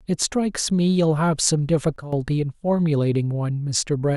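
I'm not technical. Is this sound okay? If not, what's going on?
No. At 1.96 s the system's volume setting was likely switched in a single step instead of being eased gradually, a sudden gain jump. The speech and the background noise drop sharply together, at the same instant, and stay noticeably quieter until 2.13 s.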